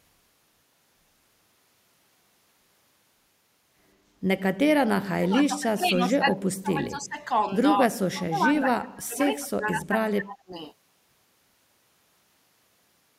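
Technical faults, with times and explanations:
4.85 to 7.31 s, 7.76 to 9.95 s and 10.12 to 10.53 s: speech suppressed in double talk. The speech sinks by up to about 35 dB. The likely cause is an echo canceller that could not separate its own talker from the loudspeaker echo while both sides talked, and turned both down.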